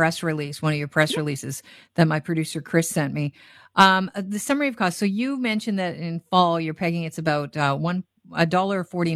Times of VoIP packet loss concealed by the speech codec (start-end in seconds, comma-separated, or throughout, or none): none